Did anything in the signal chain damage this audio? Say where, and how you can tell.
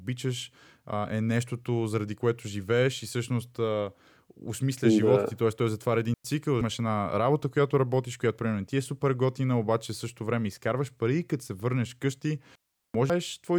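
Yes. Two digital wireless dropouts point to the radio link between transmitter and receiver. The speech cuts to near silence from 6.14 to 6.25 s, about 106 ms, and again from 12.55 to 12.94 s, about 390 ms. Each hole has clean edges and no burst of noise on either side, because the receiver mutes its output with a very short fade when too many packets fail to arrive, instead of passing corrupted audio.

Damaged data in a compressed stream shows up at the codec or storage stage as brief blips at 6.61 s and 13.10 s. Each comes shortly after a dropout. Some bytes of the encoded stream were wrong, so the decoder could not parse those frames, lost sync and jumped to the next valid frame header. That produces a short glitch at each point.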